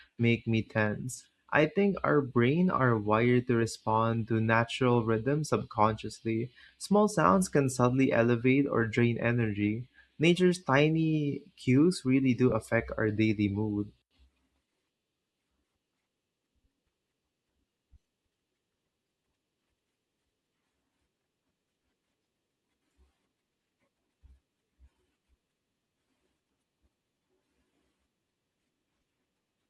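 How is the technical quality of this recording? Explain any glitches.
The recording has one brief glitch in the speech.

Lost LE Audio frames, 12.50 to 12.52 s, between "tiny cues really do" and "affect our daily mood": a 20 ms stretch of the Bluetooth LE Audio stream never arrived, which fits two 10 ms frames. The decoder covered the gap by repeating the last received spectrum with randomised signs, so the voice briefly smears into a soft, noisy blur. The gap is too short for the concealment to fade toward silence. The slight graininess heard throughout is likely from the LC3 codec that carries the link.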